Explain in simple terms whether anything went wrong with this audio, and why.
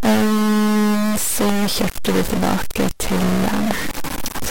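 Two things went wrong. Throughout the speech there is a distorted roughness, and even the pauses between phrases are filled with a steady hiss of noise. That points to a stuck bit, most likely one digital bit jammed on or off in a faulty cable or converter, so about half of all the sample values come out wrong. Ordinary background hiss sits quietly under the sound. This noise grinds along with the speech itself and doesn't fade in the gaps.

There are also two loud pops, one from 1.49 to 1.51 s and a softer one from 3.71 to 3.73 s. Each is a single sharp click, likely from a sudden jolt of voltage such as a plug, a switch or static. The speech carries on underneath without a break. Because each pop is brief and isolated, it is not another burst of the stuck-bit roughness.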